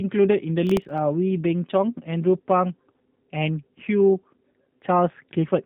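From the very start the speech has that G.729 codec quality: slightly rough, a bit synthetic, with nothing above about 3.8 kHz. The codec rebuilds each frame from a vocal tract filter, pitch and a few pulses, and the plainly audible damage fits an 8 kbit/s G.729A stream.

Then from 0.67 to 0.98 s there's a burst of processor overload crackle, a gritty tearing over the speech. The processor kept missing deadlines on tiny buffers, under a millisecond each, around ten in a row, and each miss replayed a scrap of old audio with hard edges.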